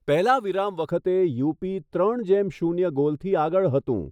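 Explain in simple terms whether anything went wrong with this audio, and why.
Something did go wrong. From about 0.91 seconds to the end of the speech, the sound turns dull and muffled. The crisp top end fades away, and the hiss-like parts of speech lose their edge. This is de-emphasis applied wrongly. A filter meant to tame treble was used when it wasn't needed. So it cut the high frequencies from sound that was already balanced. The result slopes smoothly downward, getting quieter the higher the pitch.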